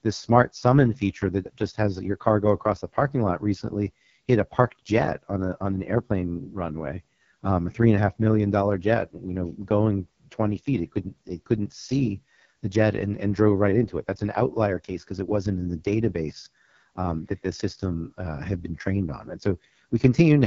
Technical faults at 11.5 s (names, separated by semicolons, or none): AMR wideband (HD Voice) codec